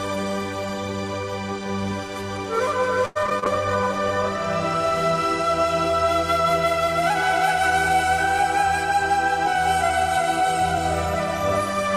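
From 3.05 to 3.44 s there's repeated packet loss, several gaps in quick succession, each patched by stretching the last sound, so it turns choppy and robotic. Right after, 3.45 to 4.56 s, a call bitrate drop from 64 to 21 kbps makes the encoder code coarsely, so things go rough and a bit muffled. Then 8.57 to 10.78 s brings a jitter buffer speed-up. The receiver trims tiny pitch-period slices, around 50 ms in all, to shed backlog, so the audio runs about 2% fast at unchanged pitch.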